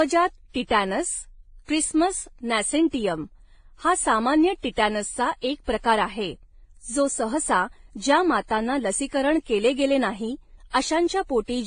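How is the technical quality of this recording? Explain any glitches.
The quality is compromised throughout. Nothing sounds above 9.7 kHz, and the speech carries the different artefacts of both codecs heard together. This is likely transcoding between lossy codecs. It fits a low-bitrate Vorbis encode re-encoded as WMA. The second codec spent bits on the first one's artefacts, and the lowest cut-off in the chain stayed.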